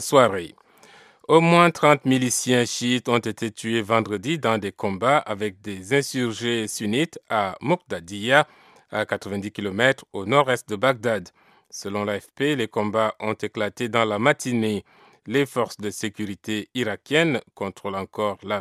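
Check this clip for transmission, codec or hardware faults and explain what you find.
No faults are audible anywhere in this clip.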